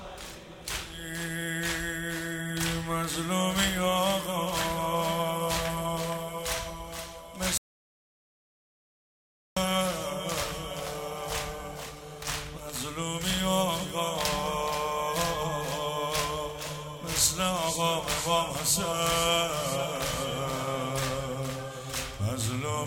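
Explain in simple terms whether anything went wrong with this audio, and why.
From 7.58 to 9.57 s there's an audio dropout to silence: about two seconds of dead silence, likely a lost input. Unlike a natural pause, even the room tone vanishes.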